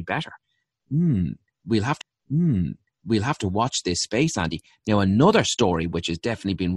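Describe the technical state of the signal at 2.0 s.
A CD skip at 2.01 s: the laser jumps tracks, giving a tick and a very brief mute before "watch this space", resuming from a displaced point rather than continuing seamlessly.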